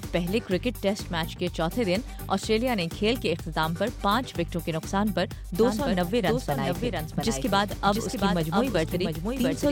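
From 5.62 s to the end, a doubled audio track appears. A dry, full-band copy trails about 700 ms behind, roughly 5 dB quieter, likely from a second capture path.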